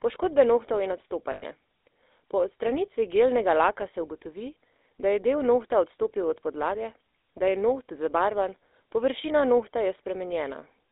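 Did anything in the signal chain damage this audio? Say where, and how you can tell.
Yes. The GSM full-rate codec at the coding stage affects the whole clip. The speech is plainly buzzy and gravelly, and the band is limited to about 300 Hz to 3.7 kHz. A pulse-driven vocal-tract model and coarse excitation cause this roughness, which fits 13 kbps full-rate coding.

Lost GSM frames, a network-stage fault, occur from 1.32 to 1.43 s. The speech freezes into a rough, metallic ring as the decoder repeats the last good frame. The 100 ms gap points to about five dropped frames.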